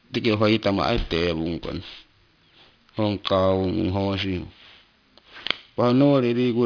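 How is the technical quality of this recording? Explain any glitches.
The technical quality is marred by one fault that runs through the whole speech clip: aliasing. The sound was downsampled without a proper anti-alias filter first, which fits a drop from 44.1 kHz to 11 kHz. Everything above the new band edge at 5.5 kHz folds back down into the audible range at false, unrelated frequencies. The folded energy sits fairly high, not far below the speech itself. Sibilants come out gritty and metallic. The top of the spectrum stays crowded right up to 5.5 kHz instead of rolling off.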